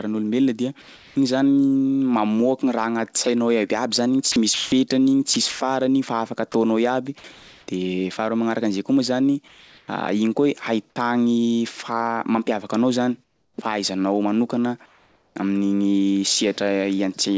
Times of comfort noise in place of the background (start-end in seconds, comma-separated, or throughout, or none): 0.82-1.16, 9.48-9.88, 13.24-13.58, 14.86-15.36